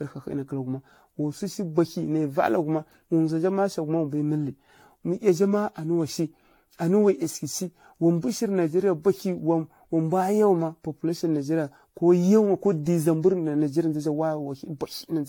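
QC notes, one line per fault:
throughout, generation loss: swirly, hollow, smeared speech with blurred attacks and nothing above 18.7 kHz; likely about ten stacked lossy re-encodes, pointing to AAC-LC around 96 kbit/s.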